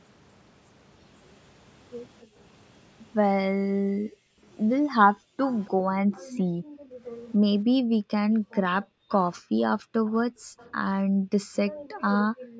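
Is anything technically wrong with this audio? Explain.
Yes. Background gated by the echo canceller, at 2.23–2.38 s, 3.56–4.43 s, 4.97–7.02 s and 7.81 s to the end: the canceller ducks the microphone while the far end plays, so room sound drops by up to about 40 dB.

Echo leak, at 5.45–5.7 s, 9.11–9.17 s and 10.06–10.69 s: a faint delayed copy of the speech, trailing by 273–284 ms and about 20–25 dB down, is likely residual loudspeaker pickup the canceller failed to remove. The call microphone processing is also audible in the band limit, with nothing above 8 kHz.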